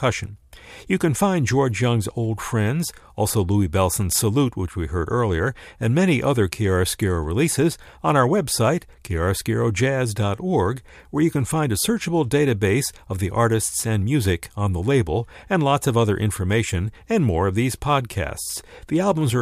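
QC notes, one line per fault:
No faults found in the speech. Nothing here needs a QC entry.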